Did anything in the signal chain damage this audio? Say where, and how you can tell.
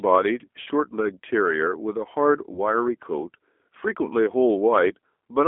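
Yes. The codec stage shows damage throughout. The speech sounds rough and synthetic, confined to roughly 250 Hz to 3.5 kHz, which fits an 8 kbit/s G.729 codec.

The network stage also shows damage, as VoIP packet loss concealed by the speech codec. At 0.62 to 0.69 s and 2.54 to 2.60 s, the decoder stretches earlier sound into a fading buzzy tone or coloured noise. This points to 40 ms and 20 ms of lost data.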